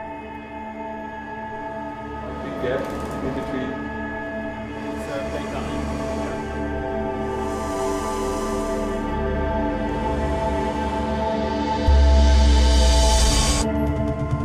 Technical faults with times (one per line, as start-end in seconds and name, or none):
none